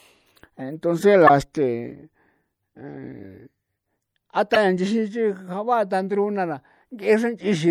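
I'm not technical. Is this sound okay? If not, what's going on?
No. Two problems are audible in this speech recording.

The first runs through the whole clip and sounds like MP3 compression, likely from saving it at a low quality setting. To save space, the encoder throws away detail it judges unimportant. Here that means faint parts of the sound flicker in and out, giving a watery, swirly quality.

The second is damaged data in a compressed stream, heard twice: from 1.26 to 1.30 s and from 4.53 to 4.57 s. At each point a small piece of the file was corrupted, so the player briefly misreads it and has to find its place again. The result is a short chirp or blip, possibly with a tiny skip forward.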